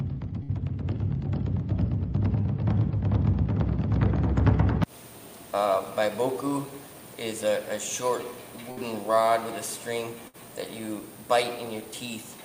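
You get a burst of packet loss at 0.43–0.51 s, 8.71–8.80 s and 10.28–10.36 s. Each time about 60 ms went missing, and the receiver papered over 50 to 57 ms by stretching the last sound and fading it, so there's a brief smeared hold before playback jumps ahead.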